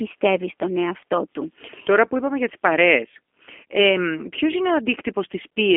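Speech passed through a G.729 codec, whose low-rate output points to 8 kbit/s: each 10 ms frame is rebuilt from a filter, pitch predictor and a few pulses. Throughout, the band sits near 250 Hz to 3.4 kHz, nothing above 3.7 kHz, and the voice sounds plainly rough and synthetic.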